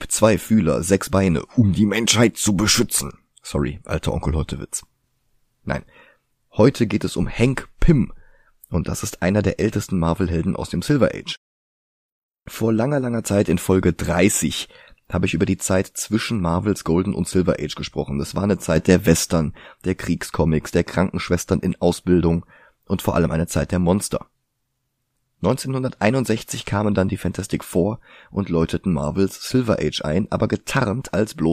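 At 18.76 s, just after "war eine", a sudden gain jump lifts the speech and background noise together by about 6 dB until 19.32 s, likely a gain change applied without a ramp. The waveform envelope steps abruptly, and the spectrogram brightens evenly across all frequencies, noise floor included.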